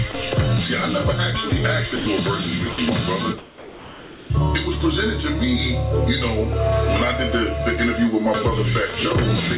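The sender's voice detector likely misjudged the sound as background four times and stopped transmitting, so the receiver substituted comfort noise: sound dropped by the voice detector at 0.12–0.14 s and 1.50–1.52 s (20 ms each), 1.96–2.06 s (100 ms) and 2.72–2.78 s (60 ms). Each time the real sound is briefly swapped for a featureless noise fill, heard as short gaps or chops that resume once the detector triggers again. From 3.38 to 4.30 s the sender likely went into discontinuous transmission, producing comfort noise in place of the background for about 0.9 s. The genuine background, roughly 19 dB below the loud parts, gives way to a smooth synthetic hiss about 2 dB quieter that lacks its original texture, until the sound returns. Through the call path, nothing can be heard above 4 kHz, which points to a narrowband codec such as G.711.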